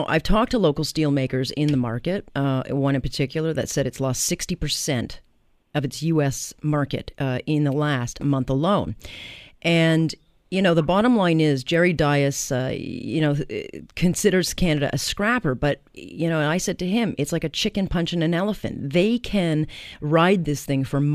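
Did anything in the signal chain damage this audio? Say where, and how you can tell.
No, nothing along the way seems to have damaged this speech recording, and there's nothing I can point to at any stage of the chain.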